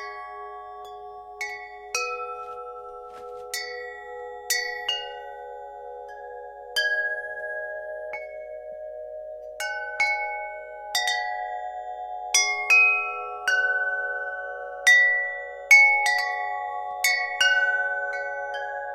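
No technical faults can be heard in this recording of sounds. There is nothing in the audio to point to a problem anywhere along its path.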